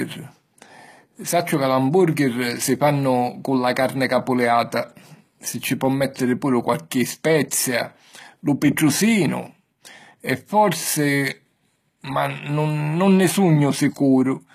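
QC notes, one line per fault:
Throughout: likely HE-AAC compression. Nothing is present above 14.9 kHz. The treble sounds gritty and metallic, and s sounds lisp. The upper bands are rebuilt from copied lower ones, so harmonics misalign. The damage is plainly audible, which fits roughly 20 kbps.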